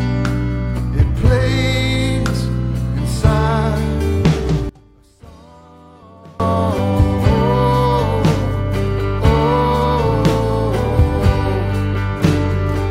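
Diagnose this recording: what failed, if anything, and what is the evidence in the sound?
From 4.69 to 6.40 s the sound drops by about 27 dB to a faint residue, then returns at full level. The likely cause is one channel inverted in the stereo wiring or mix stage, so content shared by both channels cancels on mono summing.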